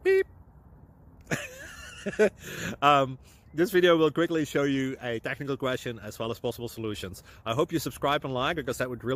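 No dropouts, distortion, timing errors or other technical faults are audible anywhere in the clip.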